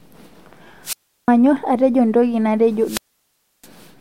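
At 0.83 to 1.29 s, just before "atejo ntoki natejo", a burst of hiss gives way to about 0.35 s of near silence. The same pattern returns at 2.84 to 3.68 s, just after "atejo ntoki natejo", with a hole of about 0.66 s. Both are wireless microphone squelch dropouts: the FM radio signal faded until the receiver's squelch muted the output.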